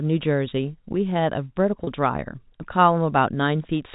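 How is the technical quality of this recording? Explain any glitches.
One brief glitch interrupts the speech, which comes through G.711 telephone coding with nothing above 4 kHz. At 1.84 to 1.87 s there is packet loss with pitch repetition. About 30 ms went missing, which fits three 10 ms packets. The receiver repeated the last pitch period, so the sound briefly holds with a slight buzz.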